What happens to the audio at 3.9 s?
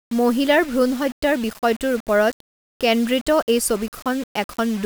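At 3.9 s the speech carries the same grainy, signal-following distortion heard through the whole clip, with error sitting roughly 20 dB below the speech. The likely cause is low bit depth without dither: rounding to a coarse grid, consistent with about 5 bits, so quiet passages turn gritty or sputter.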